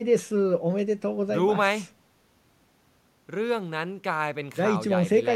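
No technical faults are audible.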